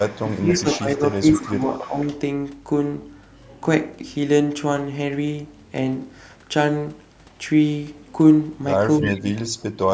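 From 0.06 to 0.78 s a faint copy of the speech trails it by 303 ms, about 20 dB down. This is an echo leak, likely from a loudspeaker whose echo canceller let part of its pickup return. Overlapping it, from 0.22 to 1.96 s, the speech dips in patches by roughly 10 dB. This is speech suppressed in double talk, likely the canceller turning down both sides while they overlap. The same 303 ms echo returns from 1.34 to 2.06 s. At 9.01 to 9.19 s a stronger echo, only about 10 dB below the speech, falls inside a deeper suppression from 8.99 to 9.92 s, where the speech drops by as much as about 25 dB.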